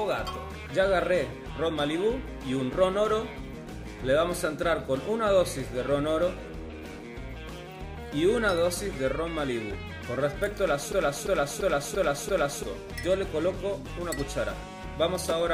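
A system hang loop runs from 10.92 to 12.63 s. The machine or its audio driver stalled while the sound hardware kept replaying its ring buffer, so one 341 ms slice repeats exactly five times at about 2.93 Hz. That loop length fits a 16384-sample buffer. The result is a hard, mechanical stutter, and roughly a second and a half of the real audio never plays.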